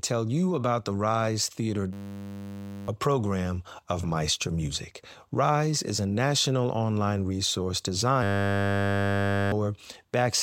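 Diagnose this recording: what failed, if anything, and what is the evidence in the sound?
System hang loop in the driver buffer: a frozen 10 ms slice buzzes at 100 Hz from 1.93 to 2.88 s, before "a program of", and from 8.23 to 9.52 s, after "a national online resource".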